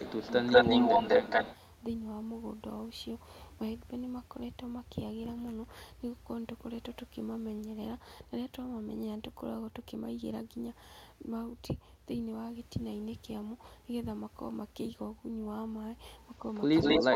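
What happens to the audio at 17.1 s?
An echo leak, likely from a loudspeaker whose echo canceller let sound through, runs from 16.75 s to 17.15 s: a copy delayed by 197 ms returns nearly as loud as the speech.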